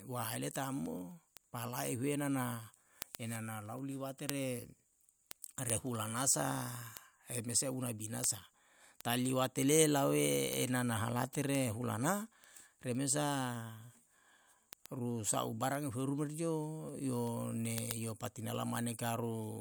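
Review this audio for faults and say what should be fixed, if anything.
Word clock ticks run through the whole speech clip, from 0.22 s to 19.57 s, roughly every 0.15 s. The receiving device isn't locked to the sender's clock, so each slip drops or repeats a sample. That rate suggests a clock mismatch of around 150 ppm. To prevent it, lock the receiver to the incoming digital clock or a shared word clock.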